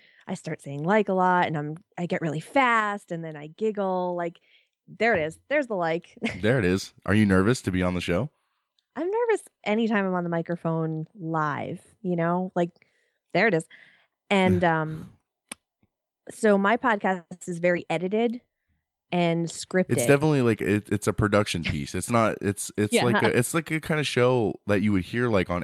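No technical faults can be heard anywhere in this speech recording. There is no moment that needs a timestamp or any comment on the signal chain.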